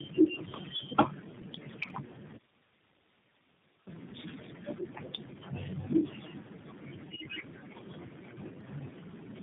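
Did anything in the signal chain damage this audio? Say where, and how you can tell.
Yes. Codec stage: tandem speech coding throughout. Rough, warbly speech with nothing above 3.8 kHz fits three chained speech codecs, each re-encoding the previous codec's artefacts.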